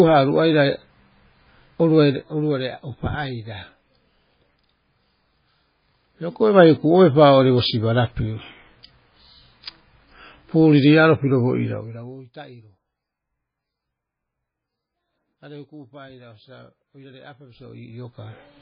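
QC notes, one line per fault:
throughout, MP3 compression (likely): heavy watery, swirly damage with nothing above 5 kHz, fitting a roughly 16 kbps encode that drops weak frequency lines frame to frame.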